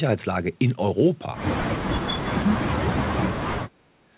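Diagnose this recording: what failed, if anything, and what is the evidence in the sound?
Call processing is at fault. From 2.12 to 3.76 s the speech dips and breaks up in pieces, about a second and a half in all, falling by as much as about 40 dB. This is likely speech suppressed in double talk: the echo canceller could not separate this side's speech from the far-end echo and turned both down. Unlike a network dropout, it pumps in level, over a band that stops at 4 kHz, which fits a G.711 call.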